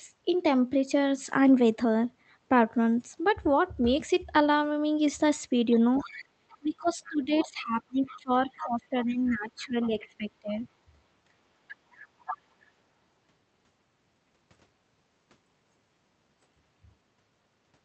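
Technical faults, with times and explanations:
5.71–6.58 s, 7.06–7.44 s, 8.08–8.18 s, 8.6–8.67 s, 9.6–9.89 s and 11.68–12.38 s, other side's voice leaking through: a second voice sits about 10 to 25 dB under the talker, in short scraps and longer runs. This is likely loudspeaker sound reaching the microphone that the echo canceller failed to remove.
6.58–10.67 s, speech suppressed in double talk: the talker's level sags and breaks up, falling by as much as about 20 dB across roughly 3 s in total while the other voice overlaps. This is likely the echo canceller, unable to separate the two voices, turning both down.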